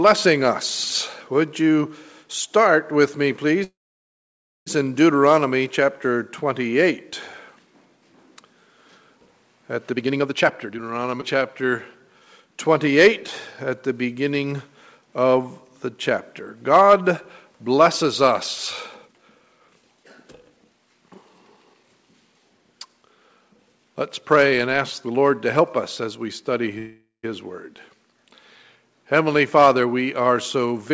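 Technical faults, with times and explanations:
3.64–4.68 s, call audio freeze: the sound stalls, a brief fading buzz gives way to about 0.93 s of near-silence, then resumes unchanged. This likely comes from delayed packets draining the jitter buffer. On a spectrogram it shows as a smeared frame, then a blank band.
9.93–10.81 s, jitter buffer speed-up: the audio plays at 167% speed at unchanged pitch, trimming roughly 0.7 s and sounding rushed. The waveform shows compressed envelopes, and the spectrogram shows unchanged harmonic spacing.
11.21–11.23 s, skip ahead: about a tenth of a second of audio is dropped and the two sides are spliced almost directly. The waveform shows an abrupt seam with a near-vertical edge in the spectrogram.
11.38–12.50 s, jitter buffer slow-down: repeated pitch periods stretch the sound to 90% speed, adding 121 ms of drawn-out audio. The spectrogram shows elongated partials.
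18.97–21.84 s, jitter buffer speed-up: a milder 115% speed-up over nearly three seconds removes roughly half a second, giving a hurried feel. Events appear packed closer in the waveform.
26.78–27.25 s, call audio freeze: a shorter 450 ms stall, with a fading fill and about 130 ms of silence before the sound continues where it stopped. It shows as a brief smear and gap in the spectrogram, likewise capped at 8 kHz.
30.89–30.93 s, jitter buffer speed-up: the final instant plays at 191% speed, trimming around 50 ms as an abrupt squeeze. It is visible as a tightly compressed last waveform cycle.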